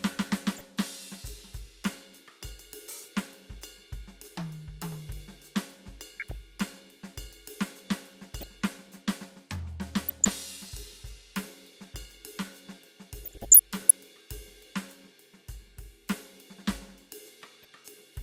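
DAB burbling breaks into this music at 0.54–0.63, 6.15–6.32, 8.26–8.48, 10.06–10.33, 13.23–13.93 and 17.45–17.73 s. Weak reception lets bit errors slip past error correction, corrupting MP2 samples, which put short blips of noise in single sub-bands, and scale factors, which make sub-bands jump in level for up to a frame.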